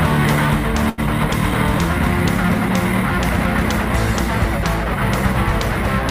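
At 0.89 s there is a short stall from a late packet, lasting until about 1.00 s. A packet failed to arrive on time, so the jitter buffer ran dry. The receiver filled the gap by stretching the last bit of sound for 84 ms. When the packet turned up, playback resumed where it had stopped. Nothing is lost. The sound simply holds too long, with a faint buzz or dip, and everything after runs 84 ms later.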